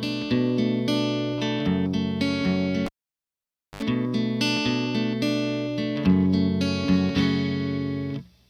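At 2.86 s there's a classic cable pulled and plugged in. A pop as the lead comes out, then almost nothing for about 0.91 s while the connection is open. As the plug goes back in, the tip touches first, and for about 70 ms you get a short burst of 50 Hz mains buzz from the ungrounded contact. Then a second pop as it seats fully and the sound comes back at 3.83 s.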